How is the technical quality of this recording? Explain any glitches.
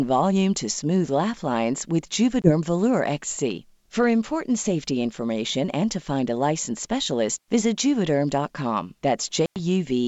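Two dropouts from packet loss on an ADPCM call, over a G.722 wideband link that carries the speech up to about 7 kHz. At 2.42–2.52 s a 20 ms gap fits roughly one lost packet. At 9.46–9.58 s a 100 ms hole fits several. Each gap is filled with silence, so the decoder's predictor and step size drift from the sender's. After the hard-edged cut the speech returns slightly distorted before settling.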